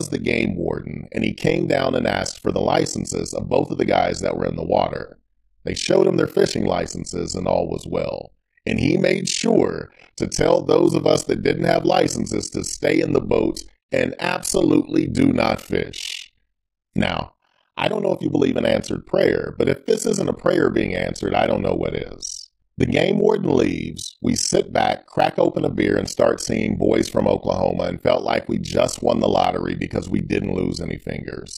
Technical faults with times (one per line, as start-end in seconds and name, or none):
0.00-31.57 overlap-add ripple
14.72-31.45 periodic USB or driver dropouts